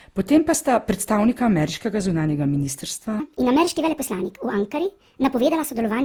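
From the start, the speech carries generation loss: a swirly, hollow texture with smeared consonant attacks, worse than a single lossy encode at this quality would leave. The likely cause is repeated Opus coding at 48 kbit/s, around four passes. Each decode and re-encode quantises on a shifted frame grid, so the noise and spectral gaps from every pass stack up. Content stops at about 20.4 kHz.

From 3.20 s, just after "zunanjega ministrstva", to the end, the section plays at the wrong speed, 1.42 times too fast. Pitch and tempo rise together, so the speech sounds hurried and about seven semitones higher. This most likely comes from the segment being played back against the wrong clock, with no pitch correction applied to the speed change.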